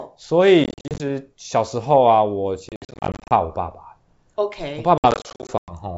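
Speech over a wideband G.722 link suffers packet loss on an ADPCM call. Bursts of dropped packets at 0.64–1.03 s, 2.69–3.32 s and 4.98–5.73 s are filled with silence, throwing the decoder's predictor out of step. The result is hard-edged gaps of up to 100 ms, each followed by a click, distortion or a level jump as the decoder recovers.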